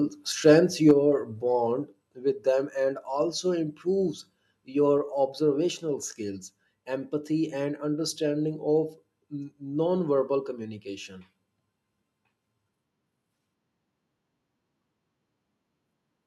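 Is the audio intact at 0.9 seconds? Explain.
No. Microphone overload runs from 0.88 to 0.91 s, just before "bond with them and": peaks push about 3 dB past the converter's ceiling, likely from excessive input gain, flattening roughly a tenth of samples into a harsh crackle. At 0.91 s a microphone volume step-down follows, likely the call software cutting input gain, so the speech and background drop abruptly by about 4 dB.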